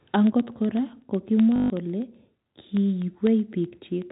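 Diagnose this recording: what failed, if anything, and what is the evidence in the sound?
A tick recurs every 0.125 s, eight per second, from 0.15 s to 4.02 s, about 30 in all. These are periodic USB or driver dropouts at the driver or buffer stage: a background task stalls the audio path on a fixed schedule, and each stall drops a tiny sliver, a fraction of a millisecond, replaced by silence. The strict clock-like spacing, present only under signal, separates it from random network loss or electrical crackle.

From 1.56 s to 1.70 s, 140 ms of sound turns into a robotic stutter with a buzz near 50 Hz. This is packet loss with the last packet repeated, a network-stage fault: packets failed to arrive and the receiver kept replaying the final good one. The buzz rate fits 20 ms packets, about seven lost. Unlike the driver ticks, it is one clustered, tonal burst rather than an even series of isolated clicks. 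The telephone-band G.711 coding itself, capped at 4 kHz, adds at most faint damage.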